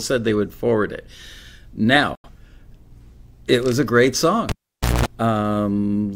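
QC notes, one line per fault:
2.15–2.29 s, digital broadcast dropout: the audio fades out over about 3 ms and stays muted for roughly 85 ms before returning. The receiver silenced output while frames were corrupt or missing, which fits two lost frames. The sound from that gap cannot be recovered.
4.49–5.06 s, cable pulled and plugged in: right after "it was a great" there is a pop, then about 0.52 s of near silence. Within that gap comes a 206 ms burst of 60 Hz mains buzz while only the plug tip makes contact. A second pop marks reconnection.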